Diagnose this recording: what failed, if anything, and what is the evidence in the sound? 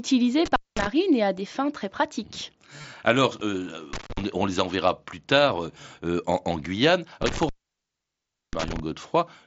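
The fault is an intermittent contact in the analogue wiring, at a cable or plug. The speech drops out three times: 0.46 to 0.87 s with the line open for about 0.21 s, 3.93 to 4.21 s open for about 0.20 s, and 7.22 to 8.80 s open for about 1.04 s. Each gap has crackle at its edges as the contact breaks and remakes, and faint hiss in between. The signal path is physically interrupted, not muted in software.

There is also concealed Bluetooth headset packet loss on the radio link between headset and phone, from 2.78 to 2.84 s. About 37.5 ms of audio is missing, spread over a 60 ms stretch, with the longest unbroken gap 30 ms. The receiver filled each hole by repeating a matching piece of the waveform just before it. That gives a brief buzzy, held tone at full level and a slight warble where real speech resumes, heard through the mSBC wideband coding already on the link.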